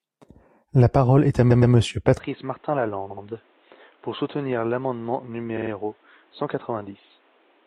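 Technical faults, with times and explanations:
1.50 to 1.73, 3.10 to 3.23 and 5.56 to 5.70 s, repeated frames: at each of these spots a short stretch of the compressed stream gets played again, so you hear a quick stutter. At 1.50 s a 116 ms block comes back twice more, adding 232 ms. At 3.10 s a 70 ms block repeats twice, and at 5.56 s a 46 ms block repeats three times, each adding 139 ms. Those block lengths fit runs of a few codec frames.
2.18 s to the end, input switched to a poorer device: from 2.18 s the sound abruptly goes duller and more boxy with no gap at the change. Nothing above 4.1 kHz gets through, the level drops by something like 10 dB, and a new noise floor appears roughly 35 dB below the signal. The likely cause is the system flipping to a different, narrower-band input, such as a headset's call profile, partway through.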